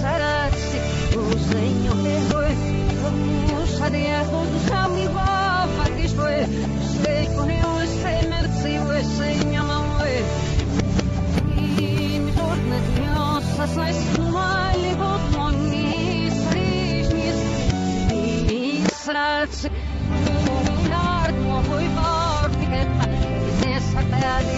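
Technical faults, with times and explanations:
11.35 to 13.87 s, imaging from linear upsampling: the top of the band dulls and a faint metallic shimmer rides on bright, hissy content, because the rate was raised by joining samples with straight lines, a poor filter that leaves mirror copies of the spectrum in place. The sound points to a 16 kHz source raised to 44.1 kHz. On a spectrogram, a weak reflected band, roughly 35 dB down, fills 8 to 16 kHz during this span.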